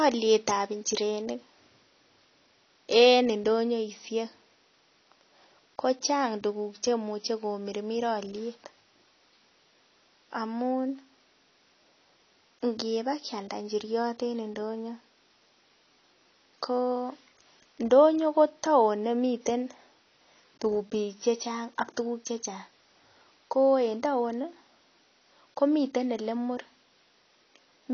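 Throughout, the speech likely went through low-bitrate AAC compression, so nothing survives above 6.6 kHz; it sounds dull and smeared, with fizzy sibilants.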